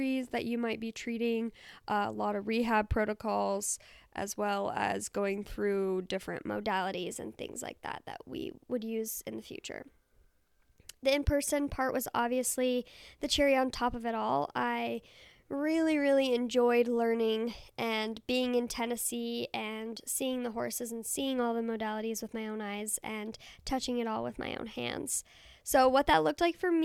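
A wrong sample rate fault begins at 6.49 s and runs to the end of the clip. From that point the samples are played back faster than they were captured, with no conversion. The ratio fits audio recorded at 44.1 kHz and played at 48 kHz. Speed rises by a factor of 1.09 and pitch rises by 1.47 semitones together, so the speech sounds slightly hurried and higher.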